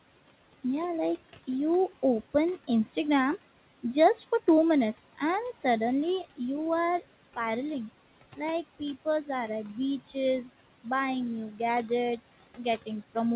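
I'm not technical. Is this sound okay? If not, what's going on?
No. Two related problems come from the noise suppressor, the part of the call system that tries to strip out background noise.

The first is noise suppressor artifacts, heard all the way through. The suppressor turns down the steady room noise frame by frame, so the background drops away in the pauses and comes back up whenever someone talks. On top of that, the speech has the dull, phone-like tone from a call line that carries nothing above about 4 kHz.

The second is speech cut by the noise suppressor, at about 11.51 to 11.6 seconds, right after "buying new". For roughly a tenth of a second the suppressor mistook part of the speech for background noise and turned it down along with the background. That stretch sounds swallowed and fainter, as if the talker briefly dropped their voice or turned away from the microphone.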